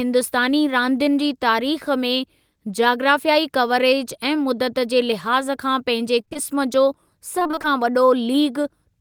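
It's a speech clip with two bursts of repeated packet loss (robotic sound). The first runs from 6.21 to 6.37 s and the second, longer one from 7.39 to 7.66 s. In each, the stream keeps dropping short chunks of up to about 25 ms. The gaps get papered over by stretching out the last bit of sound, so roughly half of each stretch is patched audio. That's what gives it the choppy, robotic texture.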